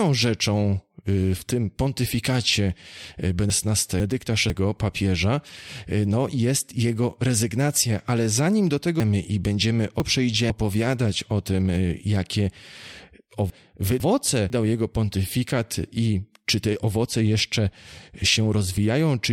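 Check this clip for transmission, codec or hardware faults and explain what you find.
Chunks out of order occur three times in this speech. From 3.5 to 4.5 s, after "w tym pontyfikacie y" and before "papieża y no jest", a 500 ms block plays one slot late. From 9.0 to 10.5 s, after "ale zanim do tego", a block lands two slots late. From 13.5 to 14.5 s, just before "jego pontyfikat i czy", another plays one slot late. A delayed chunk is placed after material that should follow it. Each spot sounds briefly jumbled. Unlike packet loss, no silence or gap appears and nothing is missing. The sound is all present but misordered.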